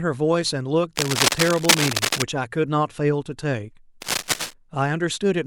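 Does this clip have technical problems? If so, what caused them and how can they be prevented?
Yes. A worn cable, connector or control being handled, which likely let its contact resistance jump about rapidly, is the cause of cable scratch noise from 0.97 to 2.23 s and again from 4.02 to 4.53 s. Each unstable contact injects dense, irregular bursts of noise, heard as scratching and rustling over the speech. In the first stretch it sits roughly level with the speech, and in the second it is somewhat quieter. Replacing worn leads and connectors, cleaning scratchy controls, and securing cables so they are not moved during recording prevents it.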